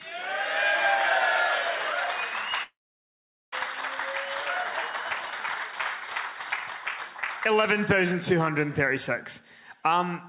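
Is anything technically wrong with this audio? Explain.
Yes. A long network dropout occurs at 2.63 to 3.55 s: packets likely stopped arriving, so the receiver extended the last sound into a fading buzz or hiss, then near-silence for about 0.8 s, before resuming without the lost 0.9 s. This is heard through a G.711 mu-law call path, with nothing above 4 kHz.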